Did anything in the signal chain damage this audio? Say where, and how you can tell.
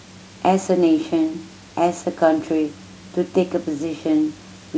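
No, nothing in the signal chain damaged this audio.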